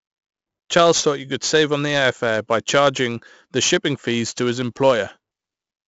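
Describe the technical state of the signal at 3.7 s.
At 3.7 s you're hearing the same 4-bit ADPCM compression that runs through the whole speech clip. Each sample is coded as a small 4-bit step from a predicted value, with the step size adapting as it goes. The damage is heavy: a gritty hiss rides on every loud syllable, and sharp onsets get roughed up where the step can't keep pace. Nothing comes through above 7.7 kHz, which fits a 64 kbps stream at a low sample rate, so it sounds dull too.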